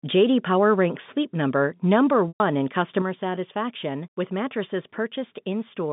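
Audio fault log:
2.28–2.40 s, packet loss with pitch repetition: about 120 ms of audio goes missing, which fits a burst of four 30 ms packets. The receiver bridges the gap by repeating the last pitch period. The repeated cycle holds briefly as a buzzy, sustained tone, then fades out over roughly the first 50 ms. Because the loss is longer than that fade, the rest of the gap falls to silence before the speech returns through a short cross-fade.
3.02–5.92 s, one channel drops out: from just after the three-second mark to the end of the clip, the level steps down abruptly by about 6 dB and stays there. The likely cause is one stereo channel cutting out before the mono sum, so content shared by both sides is halved in amplitude and anything present only in the missing side vanishes. The telephone band, roughly 150 Hz to 3.6 kHz, continues unchanged through the drop.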